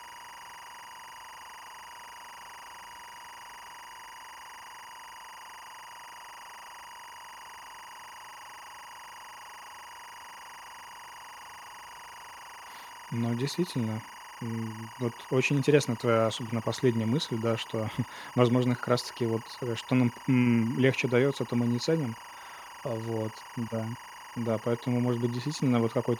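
Throughout the speech, timecode bleed from 24-frames-per-second code leaks in as a steady chirping warble near 1 and 2 kHz, roughly 20 dB down.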